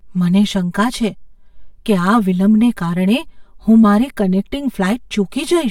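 From start to finish the speech has channel delay (comb filtering): one side arrives about 5 ms late, and summing to mono cancels energy at evenly spaced frequencies, starting around 100 Hz. That leaves fixed notches, so everything sounds hollow and phasey.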